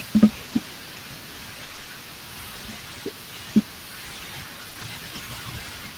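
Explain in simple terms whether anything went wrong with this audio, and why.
Yes, a few things went wrong as this speech travelled over the network.

From 0.45 to 1.87 s there is repeated packet loss, which produces a robotic sound. Small chunks of the audio kept failing to arrive, seven times in that stretch, with the longest hole lasting 60 ms. Each time, the receiver covered the hole by stretching out the last bit of sound it had. About 180 ms of the stretch was patched this way, so the speech comes out choppy, with small pieces missing.

Around 4.69 to 4.77 s, two short concealed packet losses happen back to back, each 20 ms long. The receiver filled each one by continuing the sound that came just before it, then blended back into the real audio. You hear this as a quick smear or wobble, and a short sound such as a consonant at that spot may disappear.

Right after that, from 4.77 to 4.87 s, three lost packets were rebuilt from error correction. 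Each of the following packets carried a rough backup copy of the missing one, and the receiver played those copies instead. That prevents a gap, but those 60 ms sound rougher and noisier than the audio around them.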